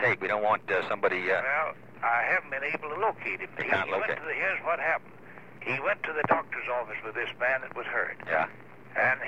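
No technical faults occur at any point in the audio, so there is nothing to place in time order.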